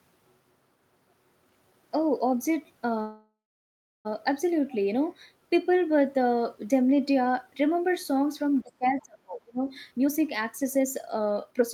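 Speech runs through three distinct call-path faults. From 3.01 s to 4.07 s there is a call audio freeze. The sound stops advancing, the last instant is stretched into a fading buzz, and then it falls to silence for about 0.67 s before the speech picks up exactly where it left off. Roughly 1.04 s is inserted, nothing is lost, and everything after it arrives that much later. The likely cause is packets held up in transit, draining the jitter buffer until the receiver had nothing to play. On a spectrogram the final frame's harmonics smear horizontally, thin out and give way to a blank band, while the waveform tapers into a flat line. Between 8.63 s and 9.62 s comes speech suppressed in double talk. Over around 0.7 s the level dips in chunks by as much as about 30 dB, with the upper frequencies thinning and some fragments vanishing almost completely. This is likely the echo canceller clamping down because it could not separate the talker from loudspeaker echo while both sides were speaking. 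The spectrogram shows ragged gaps and dulled high bands, and the waveform shows an uneven, notched envelope. From 9.91 s to 11.64 s a jitter buffer speed-up drives the speech at about 126% of normal rate without changing its pitch, so it sounds rushed. Roughly 0.5 s of audio is trimmed out in many small pitch-period cuts to work off excess buffered delay. Syllables and pauses appear compressed in time on both displays, while harmonic spacing stays the same.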